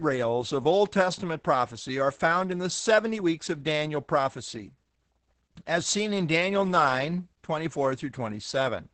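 From start to finish the speech sounds muffled, hoarse and faintly robotic, with nothing heard above about 8 kHz. This is Opus voice compression in its SILK linear-prediction mode, coding the excitation coarsely at a rate that fits roughly 10 kbps.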